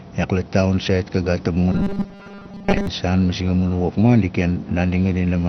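Speech sounds dull and gurgling throughout, likely from heavy MP2 compression at a low bitrate. A spectrogram shows a hard ceiling where the upper bands are switched off, with flickering, blocky bands beneath it. From 1.72 to 2.87 s a rigid 200 Hz metallic buzz appears, likely robotic sound from repeated short buffers: a 5 ms fragment loops, replacing most of that audio. The waveform shows identical repeating cycles there.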